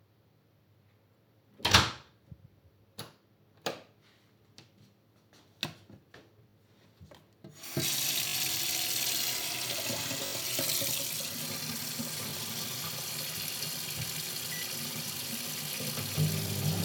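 Brief stutters, each a short fragment sounding again with a hard join, occur at 1.72, 6.5, 8.28, 10.26 and 12.3 s. These are repeated buffers: new audio arrived late, so the device replayed its last block, which fits a 20 ms buffer. The piece is repeated once at 1.72 and 12.3 s, twice at 6.5 s, and three times at 8.28 and 10.26 s.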